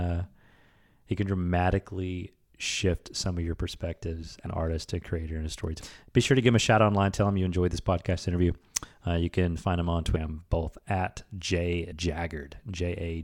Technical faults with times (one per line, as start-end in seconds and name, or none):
4.46 compressed frames skipped
10.16 compressed frames skipped
11.92 compressed frames skipped